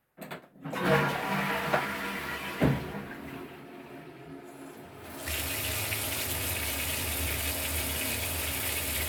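The clip is a recording of sounds, and no technical fault can be heard in it. Nothing interrupts, distorts or degrades the audio at any point.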